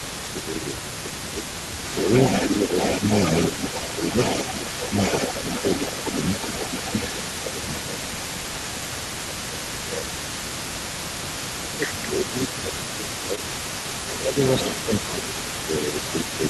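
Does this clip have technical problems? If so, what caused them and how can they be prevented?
Yes. There are three kinds of fault in this speech clip.

Echo leak runs through the whole clip: a delayed copy of the voice trails the original by about 0.22 s, only about 5 dB quieter. The likely cause is a loudspeaker on the far end whose echo canceller let part of its microphone pickup through and sent it back. On a spectrogram the harmonic pattern repeats, shifted about 0.22 s later. Better echo-canceller tuning, lower loudspeaker volume, or a headset would prevent it.

Speech suppressed in double talk occurs from 0.02 to 1.45 s, 2.06 to 4.81 s, 6.91 to 7.97 s, 8.79 to 10.93 s, and from 11.57 s to the end. The voice dips by around 5 dB in the first three stretches and around 10 dB in the last two, affecting about 1.0, 0.7, 0.5 and 2.0 s in total of the first four stretches. The likely cause is an echo canceller that could not separate the near talker from the loudspeaker echo and turned both down. 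In the waveform these show as sagging envelope segments. Better double-talk detection in the canceller, or a headset to remove the echo path, would prevent it.

Short concealed packet loss occurs at 13.35 to 13.39 s. About 20 ms of audio never arrived in time, and the decoder filled about 15 ms of it by extending the preceding sound before blending back, which causes a brief smear. A larger jitter buffer or a more stable network path would prevent it.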